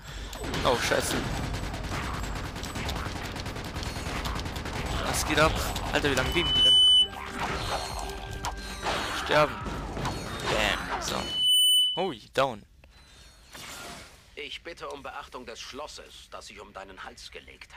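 Two bursts of loudspeaker feedback squeal cut through this audio, from 6.09 to 7.11 s and again from 11.18 to 12.17 s. Both are a single tone at 3 kHz that climbs over roughly half a second the first time and about 0.4 s the second, and ends up well above the rest of the sound, the first time by something like 15 dB and the second a bit less. A mic is hearing its own speaker, and at 3 kHz the loop gain tops one, so that tone keeps feeding itself until the loop gets broken.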